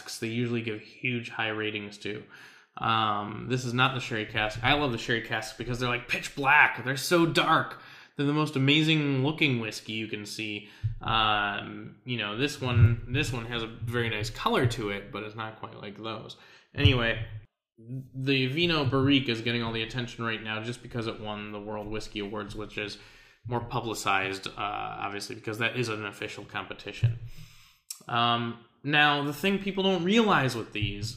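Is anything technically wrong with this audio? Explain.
No, nothing technically wrong can be heard in this audio.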